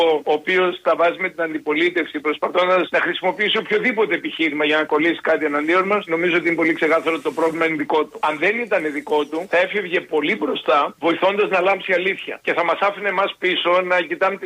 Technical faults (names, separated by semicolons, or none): none